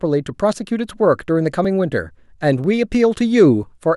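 A speech recording with audio missing between chunks: four brief skips at 0.65, 1.65, 2.64 and 3.63 s, spaced one second apart, each dropping only a few milliseconds and butting the sides together. This is likely a processor losing samples at each 1-second chunk boundary.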